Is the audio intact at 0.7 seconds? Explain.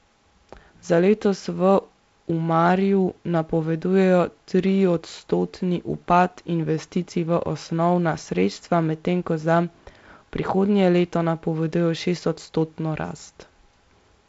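Yes, at 0.7 seconds the audio is intact, with the G.722 wideband telephone coding carrying the speech as expected and no fault present at that moment.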